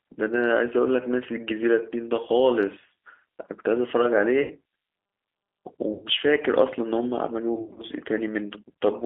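Throughout, the speech carries the G.729 codec's plainly audible damage: an 8 kbit/s model rebuilds each 10 ms frame from filter, pitch and pulse data, leaving a rough, synthetic edge and nothing beyond a 300 Hz to 3.5 kHz line band. That coarse texture, rather than smeared or watery highs, sets it apart from a transform codec.

VoIP packet loss concealed by the speech codec hits at 4.42 to 4.53 s, about 80 ms lost, and again at 5.93 to 6.06 s, about 90 ms. Each time the decoder repeats its last pitch and filter, giving a buzzy tone or coloured noise that fades instead of silence or a click. From 7.55 to 7.82 s, 140 ms of loss is scattered over roughly 240 ms in runs of up to 40 ms, so the sound stays weakened afterwards.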